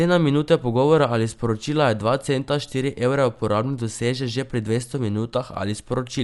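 Speech runs the whole way through with plainly audible codec damage, and it's likely Dolby Digital compression at a bitrate that fits a 64 kbps stream. Nothing survives above 11.4 kHz, so it sounds dull, and the bands the encoder starved come back as rough, fluttering dither noise around the tonal parts.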